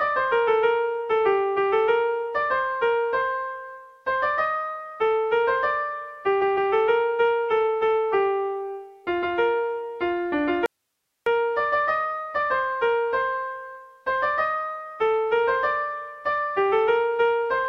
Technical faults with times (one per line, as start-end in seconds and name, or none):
10.66-11.26 audio dropout to a faint residue